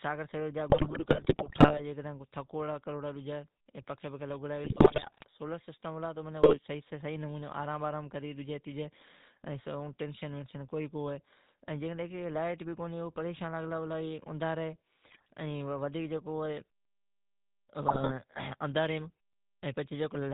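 The whole clip carries the sound of the GSM full-rate codec. Nothing passes above 4 kHz. The voice has a buzzy, gravelly edge throughout. That texture fits the 13 kbps full-rate coder. It models the vocal tract and feeds it a coarse pulse train, keeping only one excitation sample in three. The roughness is plainly audible.

GSM bit errors break in at 0.70 to 1.81 s. Flipped bits are reaching the decoder's filter, pitch and gain values. Frames come out with a bent spectrum or a sudden jump in level. The speech turns to squawks, pops and gargling. The error rate here is close to 4 percent. Further bursts follow at 4.64 to 5.25 s, the worst at about 5 percent. Shorter ones come at 6.42 to 6.60 s and 15.04 to 15.30 s.

At 17.65 s there is a clipped start after a pause. The silence before it lasts about 1 s. The output device has dozed off and needs time to wake. About 44 ms of the onset is lost. 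The sound starts abruptly, missing its first part.

Another GSM bit error burst follows at 17.88 to 18.12 s, at under 3 percent. It gives a brief gargle.

A second clipped start comes at 19.59 s, after a pause of about 0.5 s. Roughly 39 ms is swallowed.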